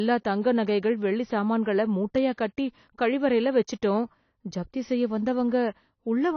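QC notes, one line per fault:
Throughout, likely AAC compression: nothing above 6.6 kHz, leaving the speech plainly dull and smeared; a spectrogram shows a flat ceiling, consistent with a low bitrate around 24 kbps.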